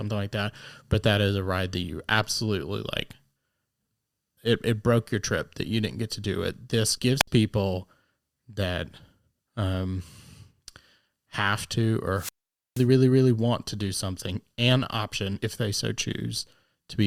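At 6.97 to 7.00 s, 11.35 s and 15.43 to 15.46 s, compressed frames are skipped. The audio leaps ahead by about 70, 40 and 40 ms, which fits whole 20 ms frames being lost. At 7.19 to 7.28 s and 12.14 to 12.87 s, wireless microphone squelch dropouts swell into static before muting for about 64 ms, then about 480 ms.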